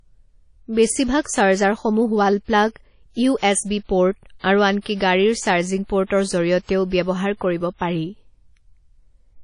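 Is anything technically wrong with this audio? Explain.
Yes. Throughout the speech there is a ringing, washy quality with hiss that swells and fades with the sound, and nothing above 10.1 kHz. This is likely WMA compression: long transform blocks smear quantisation noise in time, and a low bitrate, around 32 kbps, discards weak components and the top band.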